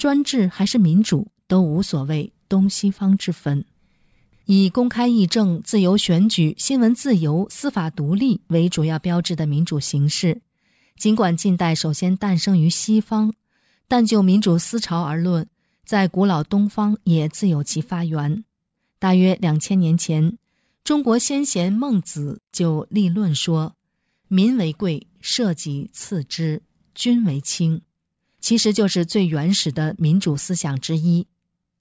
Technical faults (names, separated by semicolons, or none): none